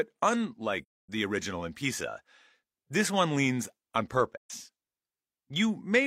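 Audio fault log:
0.83–1.09 s and 4.37–4.51 s, AAC frame loss with muting: the speech fades into silence just before "the original in" and again just after "this one leans on". The gaps last about 256 ms and 128 ms, which fits six and three lost frames that the decoder zeroed. The overlapping windows taper each edge over about a frame, so the holes are soft-edged. That sets them apart from a hard dropout, and from concealment, which would fill the gap with repeated or smeared sound.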